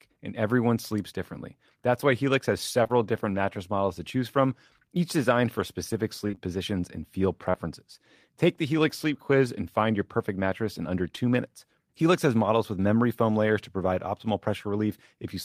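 Short concealed packet loss occurs at 2.83 and 2.87 s, at 6.27, 6.31 and 6.35 s (between "each designed for specific" and "positions and feel"), at 7.51 s just after "positions and feel", and at 11.16 s. Each loss is 20 ms of audio, which fits 20 ms packets. The decoder extended the preceding sound, then blended back, leaving a brief smear or wobble. A spectrogram shows harmonics frozen and blurred across voiced gaps. The waveform shows repeated cycles.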